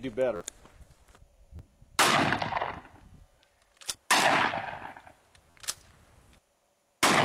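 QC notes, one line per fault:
0.36–0.41 s, repeated buffer: one roughly 11.6 ms block, which fits a 512-sample buffer, plays four extra times with a hard join at each repeat. New data arrived late, so the last block looped, giving a brief buzz and dropping about 50 ms of audio.
1.57–1.59 s, repeated buffer: two extra plays of the same block cause a short buzzy stutter, with about 20 ms of audio lost.
3.60 s, repeated buffer: a single extra play is heard as a click, and roughly 10 ms of audio is lost.
5.50–5.55 s, repeated buffer: four extra plays produce a buzz like the first one, with about 50 ms lost.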